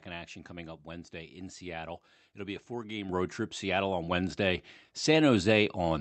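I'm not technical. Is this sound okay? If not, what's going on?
No. At about 3.09 s, between "be a four game" and "road trip", the speech suddenly gets louder. This is a microphone volume stepped up: the call software found the microphone too quiet and turned its level up in one jump. Unlike a speaker leaning closer, the voice and the background noise rise together, instantly, and stay louder.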